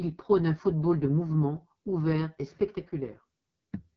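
From start to finish the speech carries the sound of the AMR wideband (HD Voice) codec running at its very bottom, and the heavy damage fits the 6.6 kbit/s mode. The codec rebuilds the voice from a pulse-excited vocal tract model, and at this rate the excitation is too coarse, so the speech comes out rough and raspy. Nothing is present above about 7.3 kHz, and the top band sounds like shaped noise rather than real detail.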